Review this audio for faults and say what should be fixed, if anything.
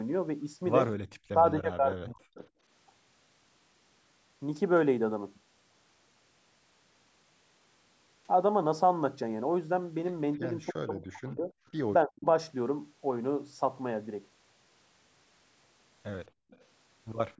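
The echo canceller likely clamped down during double talk, producing speech suppressed in double talk: the speech dips by roughly 35 to 40 dB at 1.25–1.37, 1.57–2.41, 10.73–11.51 and 12.05–12.26 s.

Likely incomplete cancellation on the far end's loudspeaker side caused echo leak: faint delayed copies, about 30 to 40 dB below the speech, trail by 280 ms at 10.34–10.38 s and 296 ms at 16.5–16.6 and 17.36 s to the end.

The echo canceller clamped the microphone hard, causing background gated by the echo canceller: the room sound drops by about 36 dB from 16.29 to 16.5 s, then returns.

To fix these, tune the echo canceller for better double-talk detection, faster convergence and gentler residual-echo suppression, or use a headset on the loudspeaker end.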